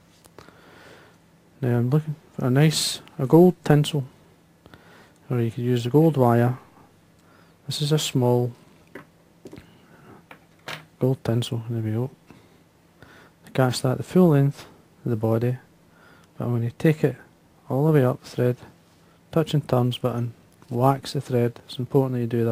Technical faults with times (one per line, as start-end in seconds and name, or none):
none